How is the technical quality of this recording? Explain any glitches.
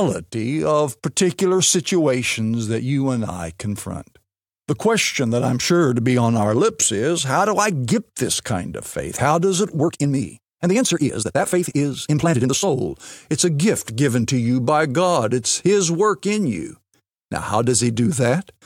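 The recording has one glitch, a time-stretched section. It runs from 9.76 to 12.70 s, right after "does it". The pace suddenly doubles while the pitch stays the same. The speech sounds rushed, then drops back to normal speed. The likely cause is software squeezing this part to fit a shorter length, playing it at twice the rate. To hold the pitch, it drops short slices of audio.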